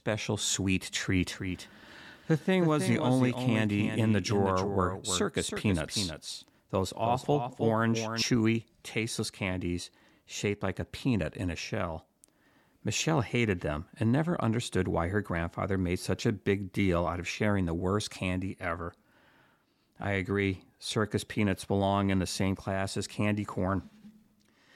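From 1.32 s to 8.22 s the speech carries a doubled audio track: a second, full-band copy of the same speech trails the original by about 300 ms, roughly 5 dB quieter. The copy is dry, with no decay or room colour, so it reads as a distinct repeat rather than reverberation, and it cuts in and out abruptly at both ends. The likely cause is the signal being captured twice, once through a slower path.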